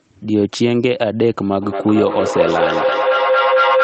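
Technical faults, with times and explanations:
1.62–3.84 s, feedback echo between two devices: a nearby device replays this microphone's signal back into it, so speech repeats about every fifth of a second, building to about 1 dB above the speech.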